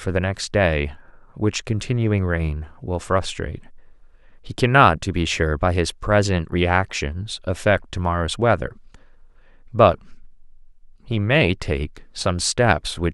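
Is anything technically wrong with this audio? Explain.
No, I hear no technical fault anywhere in this speech recording.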